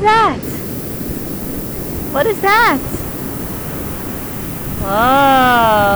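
Low bit depth with noise shaping runs from 0.43 s to the end: at 6 bits, coarse rounding error is pushed upward, giving a thin, steady hiss rising toward the top of the band.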